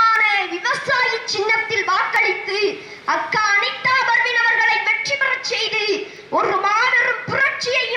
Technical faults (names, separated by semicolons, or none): periodic USB or driver dropouts